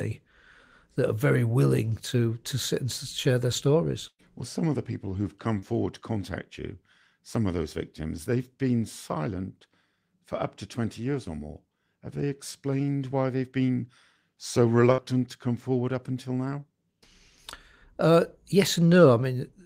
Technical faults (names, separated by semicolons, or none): burst of packet loss; short concealed packet loss